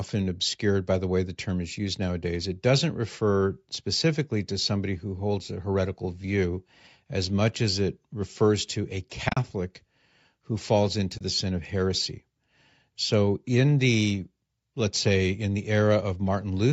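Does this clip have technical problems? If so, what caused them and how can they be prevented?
Yes: AAC frame loss with muting, where the decoder zeroed missing frames, leaving soft-faded gaps. The first is after "it refers to a" at 9.29–9.37 s, with holes up to about 40 ms. The second is after "who falls into" at 11.18–11.21 s, before "sin of heresy". On a spectrogram these show as blank vertical bands, and on the waveform as tapered dips to silence. Error-resilient transport with retransmission or forward error correction would prevent this.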